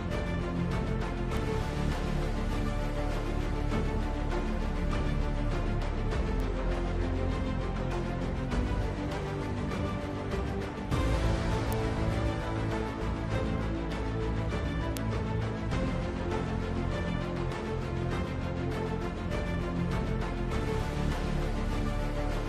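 At 1.37, 6.40, 11.73 and 14.97 s there are bit error spikes. A flipped bit makes one or two samples jump by a power of two and snap back. Each is a single sharp, broadband tick, unrelated to the sound. Peaks reach about -22 dBFS, then about -10 dBFS.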